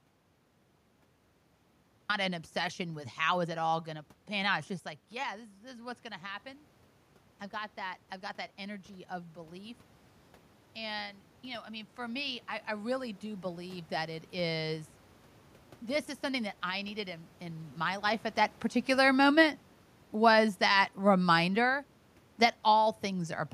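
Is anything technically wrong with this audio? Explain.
Yes. From 18.07 to 23.08 s the speech sinks by about 5 dB over roughly five seconds, and the room noise behind it drops by the same amount, so the whole recording fades rather than just the talker. That is automatic gain falling. The automatic gain control judged the input too loud, or its background noise too strong, and lowered its gain gradually. The talker shifting position around 18 s is a natural change at the microphone, but the matching drop in background noise shows the gain stage acting.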